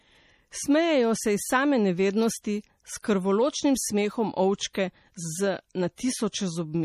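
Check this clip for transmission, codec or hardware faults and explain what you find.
Two codec faults are present in this speech clip: lossy compression damage throughout, and pre-echo on two attacks.

MP3 compression: Throughout, the speech has a watery, swirling quality, with metallic chirping on s sounds and softened attacks. The codec damage is plainly audible, with nothing above 14.9 kHz. This is likely MP3 encoding at a low bitrate, around 40 kbps. With so few bits, the encoder cuts the treble at a fixed point and drops weak frequency lines. Those lines then flicker on and off from frame to frame, which produces the swirl.

Pre-echo: At 3.02 s and again at 4.73 s, a short hiss comes just before a sharp onset. It is about 17 ms long the first time and 15 ms the second, and each attack sounds smeared rather than crisp. The codec spreads its quantisation noise across a whole transform block. 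When a sudden loud onset falls late in that block, noise sized for the loud part also fills the quiet gap before it, so it is heard ahead of the attack.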